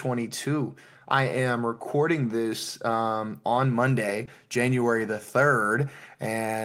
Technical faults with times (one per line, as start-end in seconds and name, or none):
4.25-4.29 short concealed packet loss